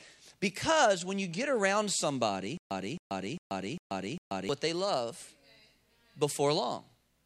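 From 2.57 s to 4.49 s a stutter with silent gaps appears: a 266 ms fragment plays five times, every 401 ms, with 135 ms of digital silence between, likely a stalled stream replaying its last buffer. The waveform shows identical blocks separated by flat silent stretches until "they love".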